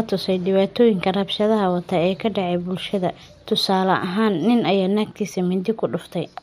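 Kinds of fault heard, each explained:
No technical faults can be heard in this recording.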